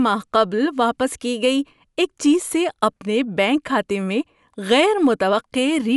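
No dropouts, glitches, distortion or level problems are audible anywhere in the recording.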